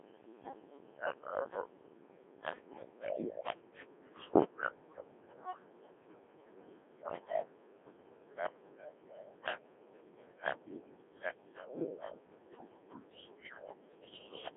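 From start to finish the speech passes through a Codec 2 vocoder, heavily damaged, at a rate that points to about 1.6 kbit/s. Only pitch, voicing, energy and a coarse spectral envelope survive, and the decoder rebuilds the voice from sine waves, so it sounds robotic and buzzy inside a narrow 250 Hz to 3.5 kHz band, with nothing above 3.8 kHz. A plain band-limited or low-bitrate waveform codec would keep natural texture; here the original waveform itself is gone.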